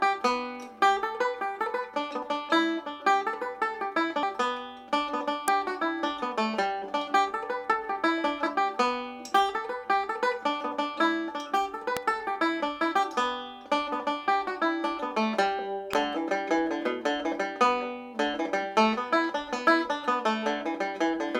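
At 5.48, 11.97 and 15.93 s, a sharp snap sits on top of the sound, each only a few milliseconds long and peaking fairly high, near -10 dBFS. These are electrical switching spikes, likely from a nearby switch or motor arcing into the audio line.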